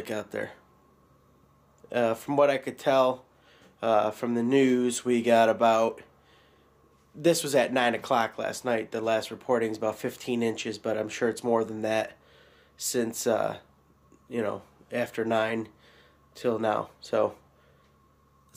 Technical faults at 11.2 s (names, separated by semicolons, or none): none